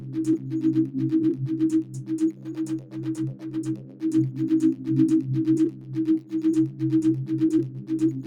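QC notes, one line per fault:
Throughout: noise suppressor applied to music or sounds. A speech-oriented suppressor treats sustained tones and reverb as noise, so gain swings by around 10 dB. Attacks pass while held material and tails sink. On the waveform the envelope pumps, and the spectrogram shows sustains and decays thinning.
0.00–0.16, 1.84–2.10, 2.33–2.53, 2.79–3.01, 3.33–3.52, 3.76–4.02, 5.71–5.91, 7.75–7.90 s: sound cut by the noise suppressor. Each dip lasts a couple of hundred milliseconds and drops about 5–6 dB as the suppressor mistakes steady sound for noise. They appear as brief envelope notches and faded spectrogram bands.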